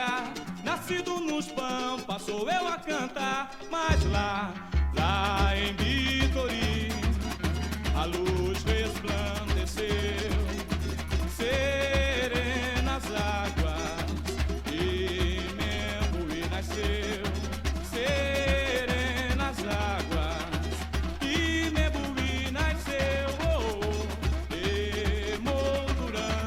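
No technical faults can be heard anywhere in this audio. Nothing in the sound points to a problem with how it was recorded, processed or played back.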